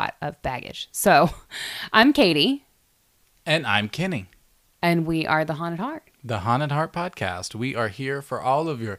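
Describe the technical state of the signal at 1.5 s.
At 1.5 s the speech sits inside a run of CD scratch ticks from 0.68 to 2.22 s: nine brief clicks, roughly six a second, the longest about 3 ms, where a blemish recurring on every disc rotation defeats error correction and the player conceals the lost samples. They show as thin vertical broadband lines on a spectrogram and tiny notches in the waveform.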